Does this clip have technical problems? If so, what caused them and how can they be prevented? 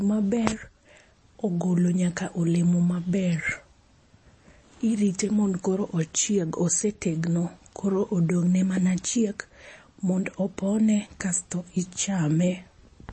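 Yes. The speech runs throughout with a watery, swirly texture and nothing above 8.4 kHz, which points to likely MP3 compression at a low bitrate, around 32 kbps: the encoder chops the treble and lets weak detail flicker in and out. Encoding at 128 kbps or higher would prevent it.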